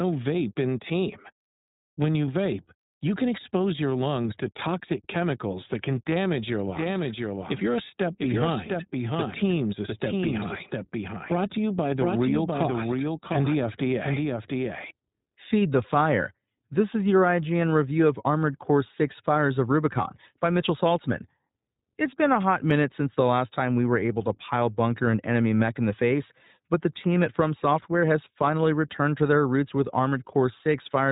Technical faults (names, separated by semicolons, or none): iLBC codec; doubled audio track